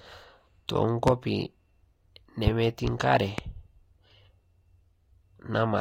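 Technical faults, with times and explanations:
1.07–1.10 s, 2.47–2.50 s and 3.38–3.41 s: loud pop. A sudden voltage pulse, likely from a switch, plug contact or static discharge, entered the signal each time, producing one sharp pop about 30 ms long and roughly 15 dB above the speech, which continues underneath.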